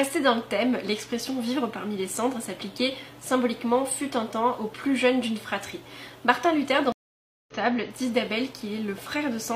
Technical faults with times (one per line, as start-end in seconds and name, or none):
6.92-7.54 stream reconnect